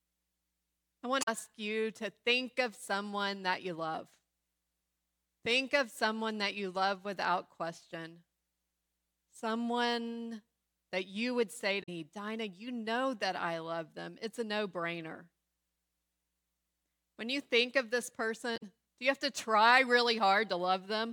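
Short blips cut into the speech at 1.19–1.28 s, just before "you to think of"; at 11.79–11.89 s, after "that you would say"; and at 18.53–18.63 s, between "you think of this" and "do you have to". They are damaged data in a compressed stream: corrupted frames made the decoder misread them and lose sync.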